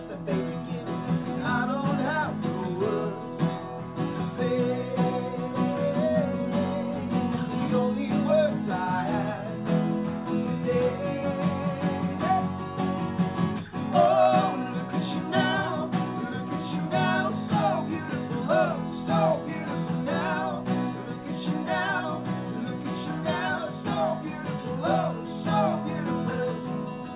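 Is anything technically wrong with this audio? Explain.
No, nothing is technically wrong with this audio, which has the 4 kHz ceiling expected of a G.711 mu-law call path at 64 kbps.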